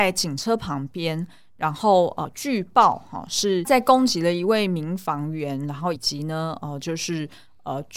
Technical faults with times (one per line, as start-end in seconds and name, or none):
2.24 compressed frames skipped
5.95 compressed frames skipped